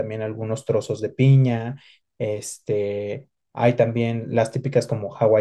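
No technical faults can be heard anywhere in this speech recording. Nothing interrupts, distorts or alters the sound at any point.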